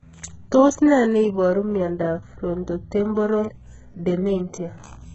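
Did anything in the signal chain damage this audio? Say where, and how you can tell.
Yes. At the driver or buffer stage, one channel runs a few samples late, around 0.1 ms, before a mono sum. This channel delay causes comb filtering, with a first notch near 5 kHz throughout, so the speech sounds hollow and phasey.

At the codec stage, heavy damage throughout and nothing above 7.9 kHz point to likely HE-AAC compression at a very low bitrate, around 8 kbps. The replicated treble makes s sounds gritty and metallic.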